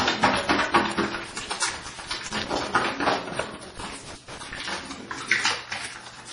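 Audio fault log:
Throughout, MP3 compression: the audio is heavily smeared and watery, with nothing above 10.5 kHz, which is likely from encoding at a very low bitrate, around 32 kbps.
1.15–2.56 s and 3.77–4.59 s, loose connector crackle: irregular bursts of crackle and scratching where a poor contact repeatedly makes and breaks, chopping the signal.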